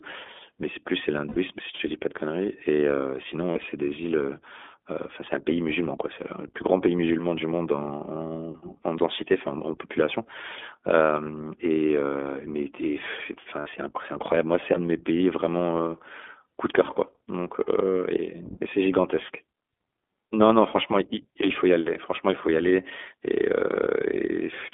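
iLBC codec throughout the speech: narrowband coding confines the audio to about 250 Hz to 3.5 kHz, and each 20 ms frame is coded independently, giving a plainly rough, synthetic edge that fits a 15.2 kbps mode.

Lost iLBC frames at 1.28 to 1.36 s, 3.52 to 3.72 s (short scattered runs) and 13.60 to 13.69 s: the decoder repeats the last pitch cycle with added noise, heard as brief buzzy held vowels, with clean recovery immediately afterwards.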